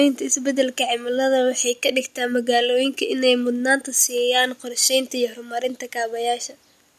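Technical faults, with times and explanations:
No technical faults detected.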